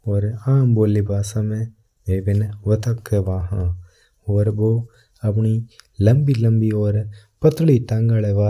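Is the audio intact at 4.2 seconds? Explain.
Yes, the speech at 4.2 seconds plays through intact, with no dropout, click, distortion or other fault at that moment.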